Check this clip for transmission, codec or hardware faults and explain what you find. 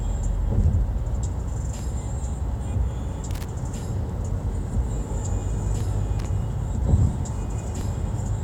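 Two faults are present: overlapping chunks at regular intervals, and two bursts of loose connector crackle.

Overlapping chunks occur at 1.79, 3.80, 5.81 and 7.81 s. The audio was handled in blocks of 2.0 s. Each block starts slightly before the previous one ends. So about 6.5 ms of sound plays twice at every join. The result is a brief click or stutter. It recurs every two seconds, which makes its source easy to spot.

Loose connector crackle appears from 3.31 to 3.45 s and from 6.19 to 6.26 s. A worn or dirty contact is making and breaking rapidly. This chops the signal on and off in quick, uneven steps. Each burst sounds like a short, scratchy crackle. The two bursts fall at irregular times, unlike the steady clicks at the chunk joins.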